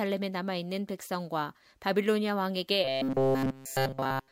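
From 2.85 s to the end of the clip, the speech turns into a rigid, metallic buzz at 133 Hz that follows the original only roughly. This is robotic sound from repeated short buffers, likely caused by audio arriving too seldom, so that a short stretch of about 7.5 ms is looped while new material is skipped. All of this stretch is repeated. The waveform shows identical short segments recurring, and a spectrogram shows a comb of harmonics spaced at 133 Hz.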